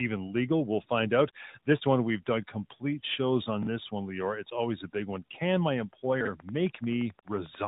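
Tandem speech coding runs throughout: the speech was decoded and re-encoded at each link, ending in AMR-NB, so each coder degraded the last one's output, leaving it rough with nothing above 3.8 kHz. The sound fits a chain of CVSD, G.711 mu-law and AMR-NB at 12.2 kbit/s.

Chunks out of order occur at 3.63–3.67 s, between "we've done complete shows" and "this one", where a 21.33 ms chunk plays one chunk late, and again at 6.21–6.27 s, where one arrives two chunks late. The jumbled joins sound garbled.

A train of clicks runs from 6.4 to 7.65 s: about fifteen regular pulses at 11.3 per second, roughly as loud as the speech, likely from interference or a faulty connection or supply.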